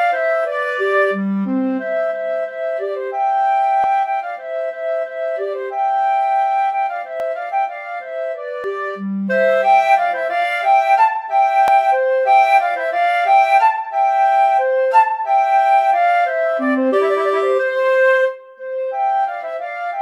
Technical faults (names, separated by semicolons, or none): dropped buffer (overrun)